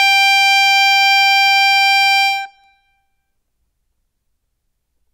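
Music, with no technical faults audible anywhere in the clip.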